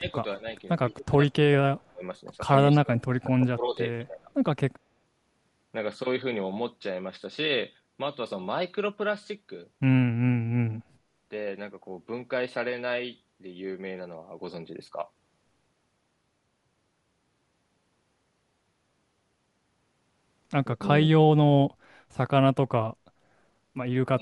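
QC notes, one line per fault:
0.00–0.04, 0.37–0.45, 0.90–1.15, 1.78–2.03, 2.63–3.80 and 4.07–4.28 s: speech suppressed in double talk. The speech keeps dipping in level. The dip near 0.4 s is shallow, the others reach about 15 to 20 dB, and the longest runs for roughly a second from 2.63 s. This is likely the echo canceller hearing both ends talk at once and turning down this talker along with the echo.
20.71–20.88 and 24.11–24.22 s: speech suppressed in double talk. Two short, deeper cuts of about 30 dB, the second lasting to the end of the clip. It is likely the same ducking while the other side talks.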